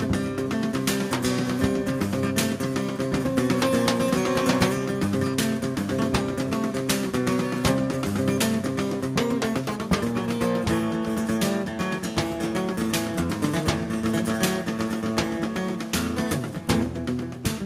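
No technical faults can be heard anywhere in the audio.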